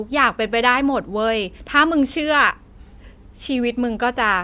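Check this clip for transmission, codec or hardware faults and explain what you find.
Nothing to flag here, as the speech comes through without anything a careful listener would pick out as a fault.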